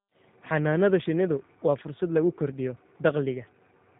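Right from the start and all the way through, the speech carries the sound of the G.729 codec. It's squeezed through a low-rate scheme that rebuilds each short frame from a vocal tract model, a pitch guess and a handful of pulses, which fits 8 kbit/s G.729A. The damage is plainly audible: voices come out a bit rough and synthetic, and there's nothing above about 3.8 kHz, so it sounds dull and phone-like.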